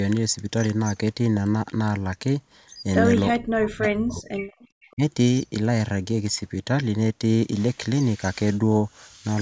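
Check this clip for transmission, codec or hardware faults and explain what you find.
Yes, two kinds of fault are present, both from a call's echo canceller struggling.

Speech suppressed in double talk, 3.36 to 4.39 s and 4.93 to 5.02 s: the speech dips by roughly 40 dB, then about 25 dB. This is likely the canceller mistaking it for echo, and it shows as waveform gaps.

Echo leak, 4.52 to 4.94 s: a faint copy of the speech returns 454 ms late, about 30 dB down, likely uncancelled loudspeaker pickup. It shows as a weak, delayed repeat of the spectrogram pattern.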